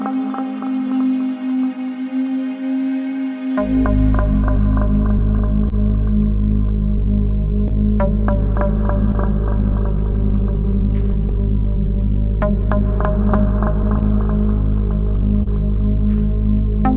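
Clock drift between sender and receiver runs through the whole recording, which passes through a narrowband call path whose cutoff near 4 kHz fits G.711 A-law. The sender's clock runs roughly one and a half percent slow relative to the receiver, so audio arrives a little behind the rate at which it is played out. The jitter buffer is steadily starved rather than flooded, and the receiver has to make up the shortfall continuously instead of all at once.

Repeated timing corrections are how it makes up that shortfall, from 0.81 s to 15.2 s. The receiver repeatedly repeats or stretches short pieces, all in the same direction, so playback runs at about 99 percent speed. Over the stretch this adds roughly 150 ms in total. The edits are small and unevenly spaced. If they are heard at all, it is as a slightly unsteady tempo or slight hiccups rather than as distinct glitches.

A short stall from a late packet occurs at 5.69 s to 5.74 s. 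The packet missed its playout time, the buffer ran dry, and the receiver held the last sound for 30 ms until the packet arrived. Playback then resumed from the same point, with nothing lost, leaving a briefly sustained sound.

A second short stall from a late packet follows at 15.43 s to 15.48 s. The last sound is filled for 29 ms, again with nothing missing, and the same brief held sound results.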